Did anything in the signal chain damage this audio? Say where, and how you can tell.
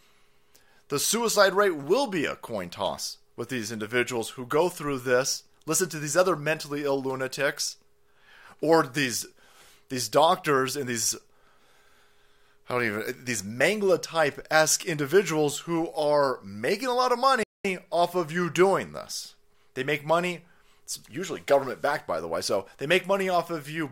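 Yes, a playback stall at the playback stage. The player likely ran short of data or had its thread blocked, so output went silent from 17.43 to 17.65 s, cutting the speech after "making a lot of" for about 0.21 s before it resumed at "off of you doing".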